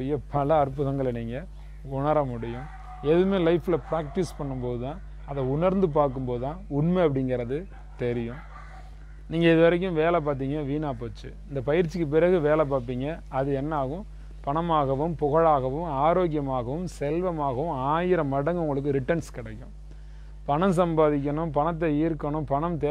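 A steady mains hum runs under the audio from start to finish. It sits at 50 Hz, with some low harmonics above it. The hum is fairly prominent, about 15 dB below the signal. A ground loop or nearby transformer is coupling the power line into the recording.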